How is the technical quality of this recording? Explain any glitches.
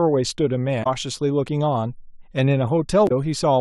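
The speech is interrupted twice by damaged data in a compressed stream, at 0.80–0.87 s and 3.05–3.11 s. Corrupted bytes make the decoder misread frames and lose sync until the next header, producing brief 70 ms glitches.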